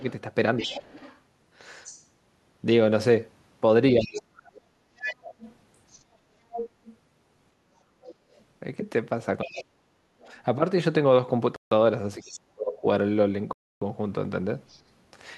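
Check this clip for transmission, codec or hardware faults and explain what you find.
The clip has three kinds of fault: echo leaking from the far end, near-end speech being ducked while both sides talk, and two short dropouts from the wireless link.

Other side's voice leaking through occurs from 0.0 to 2.04 s, from 4.02 to 9.61 s, and briefly from 14.69 to 14.8 s. The cause is likely a loudspeaker feeding the far talker back into the microphone, with the echo canceller not removing all of it. A second voice sits under the main one, at about 15 dB below it at first and about 10 dB below in the long middle stretch. The final scrap is faint, at about 35 dB down.

Speech suppressed in double talk occurs at 0.59 to 0.89 s, 3.96 to 5.34 s, 9.44 to 10.29 s and 12.17 to 12.85 s. When both ends overlap, a canceller unable to tell the local talker from echo likely pulls the whole signal down. The main voice sinks by about 20 dB in the first short dip and by roughly 35 to 40 dB in the later ones, turning near-inaudible in pieces while the other side speaks.

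Bluetooth stall occurs at 11.56 to 11.72 s and 13.53 to 13.82 s. The sound stops dead for 153 ms and then 287 ms before carrying on. This fits a headset whose buffer ran empty while interference held up packets, with playback likely waiting on retransmissions. Both gaps are clean silence with an abrupt restart, unlike the ducking heard elsewhere.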